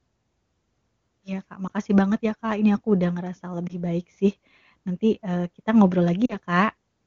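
At 1.68 to 1.71 s, just before "banget ya", and at 3.67 to 3.75 s, between "aku udah ngerasa" and "baik sih", lost AMR speech frames cause a brief dip or warble. Each fits a single damaged frame that the decoder covered by repeating the previous pitch and vocal tract settings at reduced gain. At 6.25 to 6.35 s, after "eee kita ngobrol", the sound drops to near silence, which points to two consecutive lost frames. On a spectrogram these show as short smeared, frozen harmonics. On the waveform they are brief amplitude sags.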